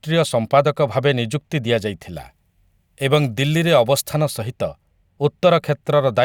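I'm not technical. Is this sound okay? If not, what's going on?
No. From about 2.14 to 4.14 seconds the speech turns thin, bright and hissy, with harsh s sounds. This is pre-emphasis left on. The treble was boosted before storage, and the matching step that should turn it back down was skipped.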